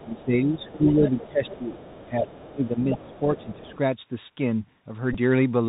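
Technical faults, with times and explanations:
Throughout, Bluetooth CVSD headset codec: the speech is squeezed into a narrow telephone band with nothing above 4 kHz, and the damage is plainly audible. A one-bit delta coder running at 64 kbps can only step up or down each sample, so sharp, loud high sounds outrun the step size and grind, s sounds turn scratchy, and a fine granular hiss sits under everything. On a spectrogram the energy stops at a hard ceiling at 4 kHz, with a grainy noise floor below it.
0.00–0.25 s, 0.59–1.28 s, 1.45–1.94 s, 2.26–2.41 s, 2.81–3.19 s and 3.36–3.77 s, other side's voice leaking through: a second, fainter voice comes through underneath the main one. It sits about 20 to 30 dB down in most stretches, but rises to about 10 dB below the speech at 2.81–3.19 s, where it is easiest to hear. It is likely far-end audio from the loudspeaker that the echo canceller failed to remove. 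A spectrogram shows a second, weaker harmonic pattern interleaved with the main one.
0.04–2.77 s and 2.93–3.74 s, speech suppressed in double talk: the main voice repeatedly dips, dulls and drops out in pieces while the leaking voice is present. The first span is the deeper one, with drops of about 20 dB across roughly two seconds in total. The second is milder, at about 10 dB over around half a second. This is likely the echo canceller turning everything down because it could not separate the talker from the echo. The waveform envelope shows ragged notches and the spectrogram's upper bands thin out.
5.13–5.16 s, Bluetooth headset packet repeated: a brief buzzy burst of about 28 ms replaces roughly 15 ms of lost audio. Lost link packets were filled by decoding the previous packet's bits again, and the repeats every 3.75 ms give a short buzz near 267 Hz, which fits about four lost packets. 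On the waveform a short block of identical repeating segments appears. The spectrogram shows evenly spaced horizontal harmonics of 267 Hz across that slice.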